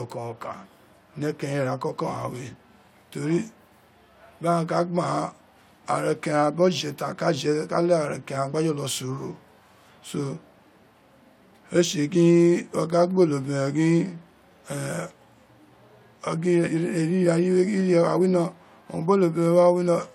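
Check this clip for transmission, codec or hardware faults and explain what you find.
Checking the clip turns up no faults to explain.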